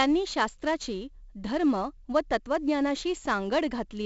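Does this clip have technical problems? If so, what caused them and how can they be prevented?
Yes. 4-bit ADPCM compression runs throughout the speech. Each sample is stored as a coarse 4-bit step from a predicted value, and the step size adapts as it goes, so the coding error rides along at a level tied to the signal. The damage is heavy: a gritty hiss clings to every loud syllable, and sharp attacks smear where the step size lags. Nothing is present above 7.7 kHz, which fits a 16 kHz sample rate and so a 64 kbps stream. To prevent it, record or export with a lossless format or a modern codec at a full sample rate instead of 4-bit ADPCM.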